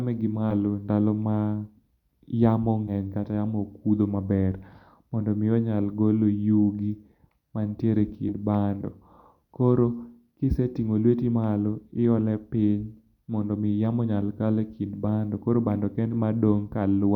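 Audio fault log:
0.50–0.53 s, 2.87–2.92 s, 8.28–8.34 s, 16.10–16.14 s: compressed frames skipped. Each time the speech jumps forward, losing roughly 40 ms, 150 ms, 50 ms and 70 ms of material. The gaps come in whole multiples of a short block, which fits a 10 ms codec frame. Those frames were missing or were rejected by the decoder as damaged.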